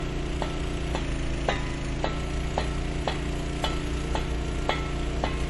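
From start to end, the sound carries plainly audible MP3 compression. Nothing is left above 11.4 kHz, and weak frequency lines flicker in and out, giving a watery swirl. That fits a low bitrate around 48 kbps. Unlike a simple low-pass filter, the damage shifts from moment to moment.

From 1.00 s to 1.99 s comes a drift correction step, likely from clock-matching software that slowed playback in one jump to manage its buffer. Speed drops about 6.3% and pitch falls 113 cents, roughly a semitone, then both snap back at once. Tape wow wobbles continuously, but this is a single flat, steady offset.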